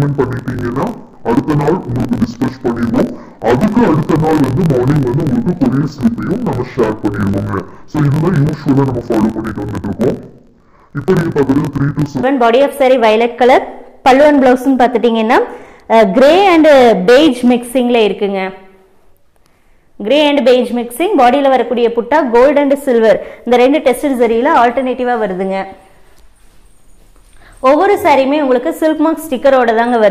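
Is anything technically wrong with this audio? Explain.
Yes. From 0.0 to 12.24 s the audio shows interleaved audio read as planar. Each block of about 21.8 ms holds alternating left and right samples, but the decoder treats the first half as one channel and the second half as the other. Each half is stretched across the whole block, so the sound drops an octave while keeping its pace, and it comes out dull and robotic, with a buzz at the 45.9 Hz block rate.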